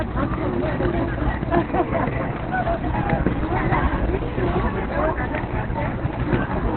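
From start to finish the sound is muffled and hoarse, with nothing above about 4.2 kHz. That's likely heavy Opus compression: the encoder has fallen back to its narrowband SILK speech mode, which fits a starved bitrate around 12 kbps.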